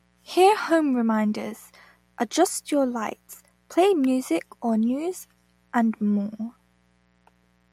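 Throughout, a mains buzz runs about 40 dB under the speech; 60 Hz switching spikes add raspy harmonics up to several kilohertz, unlike a hum.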